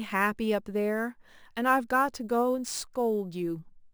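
Speech recording that has gone through crude rate conversion, with samples repeated to the nearest position and no filtering, a pattern that fits a 32 kHz to 44.1 kHz change. Throughout, this leaves a gritty, inharmonic fizz roughly 25 dB below the voice, strongest on loud and bright sounds.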